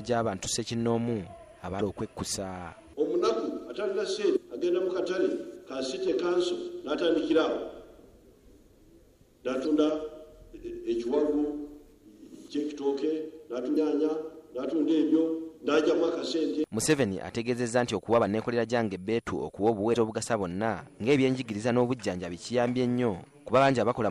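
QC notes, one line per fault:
1.77–1.81, 4.33–4.37, 9.63–9.67, 13.73–13.77 and 19.92–19.96 s: damaged data in a compressed stream. Each event is a brief chirp, squawk, click or short hole of about 40 to 46 ms, where corrupted bytes make the decoder misread frames, lose sync and hunt for the next valid header. Unlike a plain dropout, these bursts come from the decoder losing its place in the stream before normal sound resumes.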